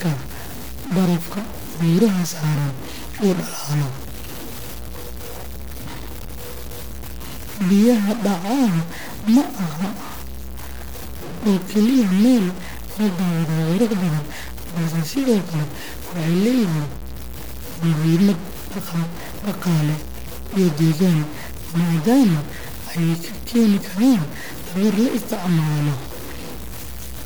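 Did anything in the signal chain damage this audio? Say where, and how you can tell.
Yes. A stuck bit, likely in the converter or its data lines, runs throughout the speech: a harsh, buzzy distortion rides every syllable, and pauses fill with noise from a bit step of roughly -25 dBFS. A spectrogram shows broadband hash in the gaps, and the waveform shows small values jumping by a fixed step.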